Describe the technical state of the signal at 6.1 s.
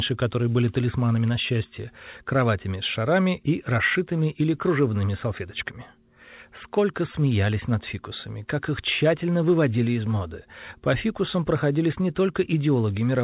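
At 6.1 s the speech is intact, with no dropout, glitch or distortion, just the narrowband telephone sound of a G.711 mu-law call path that leaves nothing above 4 kHz.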